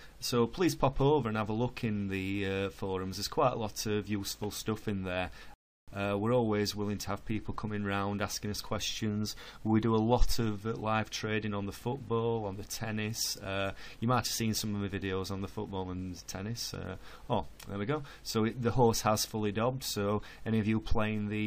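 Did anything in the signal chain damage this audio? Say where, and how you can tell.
Yes, a rebuffering stall at the playback stage: from 5.54 to 5.88 s the sound drops to silence, then resumes exactly where it left off, adding about 0.34 s. The player's buffer ran dry awaiting data. A spectrogram shows a clean blank column; the waveform flatlines.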